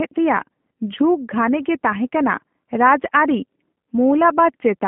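Throughout, the speech carries G.729 codec damage: rebuilt from a vocal tract filter and sparse pulses, it sounds rough and synthetic, which fits 8 kbit/s. Nothing passes above 3.5 kHz.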